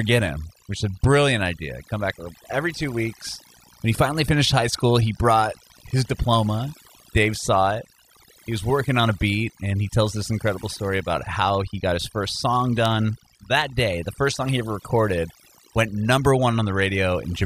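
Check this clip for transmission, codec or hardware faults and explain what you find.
Two faults run through the whole clip. There's a mains buzz at 60 Hz, roughly 20 dB under the speech: switching spikes from a dimmer or rectifier stack up harmonics, giving a steady, raspy edge. There's also overdone noise removal, where bands near the noise estimate got pulled way down, taking quiet speech with them. That leaves twinkly near-silence.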